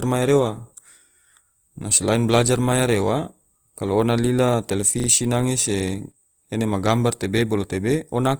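Speech, with Opus compression audible throughout: the tonal parts sound grainy and rough as the encoder, likely running in its music mode at a low bitrate, fills starved bands with noise. A repeated buffer at 5.0 to 5.08 s, just before "nange se", plays one 40 ms piece three times with hard joins, heard as a short stutter.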